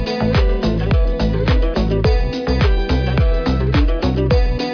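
No technical fault can be heard anywhere in the audio.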